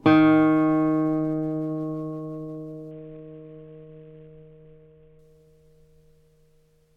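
A Bluetooth SBC bit pool drop runs from 2.91 to 5.19 s in this recording of everyday sound. For those 2.3 seconds the treble goes dull and a gritty, granular noise rides on top, which fits the sender cutting the bit pool from about 28 to around 5, near 54 kbps. With so few bits, the highest sub-bands receive little or nothing and the remaining bands are coarsely quantised, until the link recovers.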